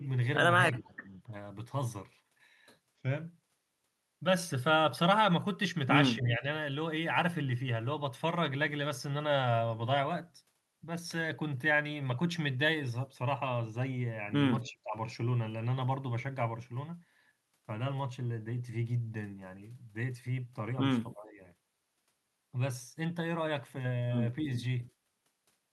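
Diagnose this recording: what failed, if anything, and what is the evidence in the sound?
The speech dips abruptly four times: at 0.79–1.33 s, 6.17–6.45 s, 14.63–14.96 s and 21.13–21.4 s. The level falls by about 15, 10, 35 and 20 dB respectively, and the deepest one at 14.6 s nearly cuts out. This points to call processing, most likely speech suppressed in double talk. With both ends active, the echo canceller could not tell this talker from loudspeaker echo, so it attenuated everything until the overlap ended.

During two of those dips, at 0.86–0.90 s and 14.64–14.71 s, a faint scrap of delayed voice slips through, about 30 dB below the speech. Both times it trails the original by 292 ms. This is likely echo leak in the same call-processing stage: the far end's loudspeaker output reached its microphone, the canceller failed to remove all of it during overlap, and the residue came back as a brief, quiet delayed copy.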